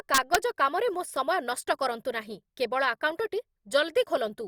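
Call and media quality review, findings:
Integer overflow, 0.14–0.35 s: harsh cracks on loud speech peaks, signal only about 1 dB past full scale. Gain or mix stage wraps instead of saturating. Waveform: peaks jump rail to opposite rail. Spectrogram: broadband vertical streaks.

Clock drift buffer slips, 0.94–4.30 s: regular clicks every 1.12 s, about four in all. Likely cause is two unsynchronised device clocks roughly 150 ppm apart, with the buffer dropping or repeating a few samples per slip. Spectrogram: evenly spaced thin vertical lines. Waveform: small discontinuities.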